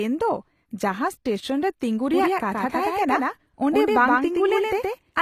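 From the start, the speech carries plainly audible codec damage. The likely cause is HE-AAC compression. The top of the spectrum is rebuilt rather than kept. Lower bands are copied upward and shaped by a coarse envelope. So the treble exists but is not the original, and its harmonics do not line up with the lower part. Nothing reaches above 14.9 kHz. The damage fits a low bitrate of around 24 kbps.

At 2.14 s a second copy of the speech appears, and it runs to the end. This is a doubled audio track. It is likely caused by the audio being captured again along a slower path, or by an edit that holds two copies out of step. The copy trails by about a tenth of a second. It is roughly as loud as the original. It is full-band, with no decay or room colour. It starts abruptly.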